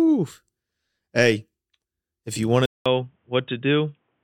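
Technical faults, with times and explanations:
2.66 to 4.24 s, input switched to a poorer device: after "if you want to", a 0.2 s gap, then duller, slightly quieter sound with nothing above 3.8 kHz and a faint new noise floor, likely a change to a narrower-band input.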